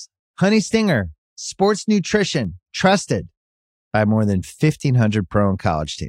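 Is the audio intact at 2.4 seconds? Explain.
No, there is a single sharp click at 2.45 s, likely dropped samples: a fraction of a millisecond is missing, so the waveform jumps abruptly between values.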